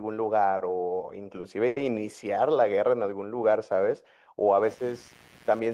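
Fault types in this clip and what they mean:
Short stall from a late packet: Three times a speech packet missed its playout deadline, the jitter buffer drained, and the receiver held the last sound until the packet arrived, then resumed where it had stopped. Nothing is lost, but the speech hangs briefly with a slight buzz or dip: about 20 ms of fill near 0.57 s, 30 ms near 1.40 s and a longer 90 ms hold near 1.67 s, each pushing playback later.
Computer activity noise: Changing processor, graphics or mouse load disturbs the ground shared with the audio circuit, and that disturbance leaks into the signal as interference following the machine's workload rather than the speech. From about 4.68 s to the end, a buzzy, pulsing noise repeating roughly a hundred times a second sits about 30 dB below the speech, adding a low-level buzz underneath.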